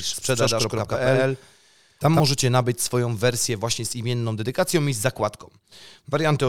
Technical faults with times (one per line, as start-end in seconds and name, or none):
0.00-2.20 doubled audio track